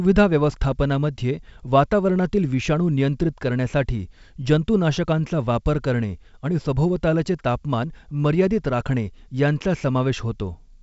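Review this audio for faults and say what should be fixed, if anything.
No faults found; nothing to fix.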